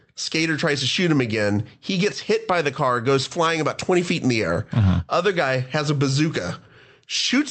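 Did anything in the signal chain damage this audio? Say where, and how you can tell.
No, no damage found.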